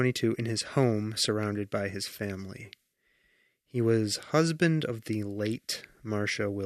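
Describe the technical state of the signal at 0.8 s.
At 0.8 s the speech signal is intact, with no dropout, distortion or other fault at that moment.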